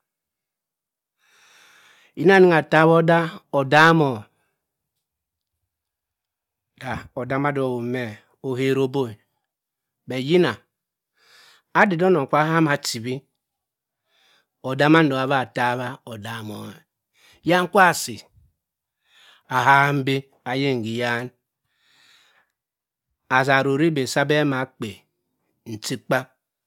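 Nothing in the speech stood out as a technical fault on listening.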